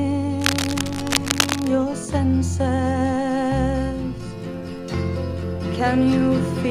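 Cable scratch noise runs from about 0.40 s to 1.69 s, a dense, uneven scratching and rustling laid over the sound for just over a second. It sits only a little below the level of the sound itself, so it is clearly audible throughout that stretch. The likely cause is a worn cable, connector or control being moved, its contact resistance jumping rapidly and injecting bursts of noise into the signal.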